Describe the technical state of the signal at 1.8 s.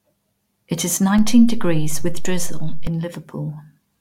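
A DC step runs from 1.19 to 2.87 s: the waveform's zero line sits offset by about -15 dBFS, with a low thump where it jumps and returns.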